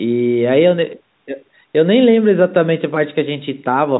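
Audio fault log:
No faults heard in this speech recording.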